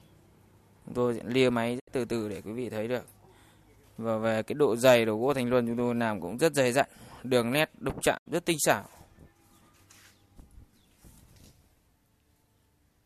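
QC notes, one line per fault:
1.78–1.89 s and 8.17–8.28 s, digital broadcast dropout: the sound fades out over about 20 ms, stays silent, then returns, a hole of roughly 0.11 s each time with identical shape at both points. The receiver stopped getting usable frames, either because the signal was lost or the frames failed their checksum, so it muted until valid data resumed. About 72 ms of programme is missing in each gap, which fits three lost frames. That audio is gone, not delayed.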